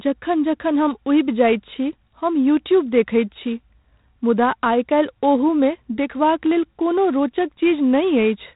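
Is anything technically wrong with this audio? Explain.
Yes. G.726 ADPCM coding damage runs through the whole speech clip. The codec codes each sample as a few bits of difference from an adaptive prediction of the waveform. With so few bits, the prediction errors become clearly audible noise. A harsh, rasping hiss rides on the speech and rises and falls with its level. Nothing above 3.8 kHz survives, so the sound is narrow and telephone-like. The roughness fits the 24 kbit/s mode.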